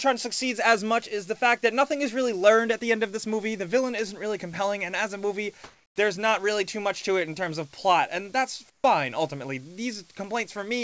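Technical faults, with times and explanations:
5.64 to 5.96 s and 8.70 to 8.84 s, comfort noise in place of the background: in each quiet gap the real background, which sits about 33 to 34 dB below the loudest sound, gives way to a smoother synthetic noise, about 2 dB louder in the first gap and about 15 dB quieter in the second. The likely cause is discontinuous transmission: the sender stops sending in the gap and the receiver fills it with generated noise. Unlike a gate or dropout, the gap is never silent; it is filled with noise of a different texture.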